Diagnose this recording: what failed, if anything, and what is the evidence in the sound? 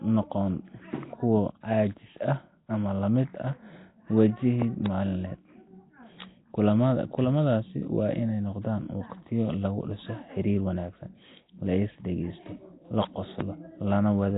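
Nellymoser compression, throughout the 14 s of speech, points to the codec stage. The speech has a rough, hissy halo and a smeared, underwater texture, and nothing is present above 3.8 kHz. This is likely Nellymoser Asao, the old Flash microphone codec, which fits a low bitrate around 16 kbps. It codes short blocks with a fixed, meagre bit budget, so weak bands get no bits and are refilled with noise. The damage here is heavy.

Loud pops occur as a pair between 4.62 and 4.88 s, and as a single pop from 13.41 to 13.43 s, right after "la is dhagaysto la". Each peaks about 15 dB above the speech, which carries on underneath. The sharp, isolated transients point to the analogue wiring or the driver. The likely cause is a voltage step or pulse from a connector, switch, static discharge or driver glitch, which the circuitry after it turns into a brief click or thump.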